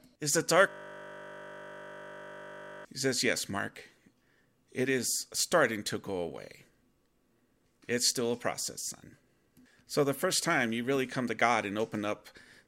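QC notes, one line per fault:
0.69–2.85 s, system hang loop: a 20 ms slice of audio repeats exactly while playback stalls, so it turns into a steady 50 Hz buzz.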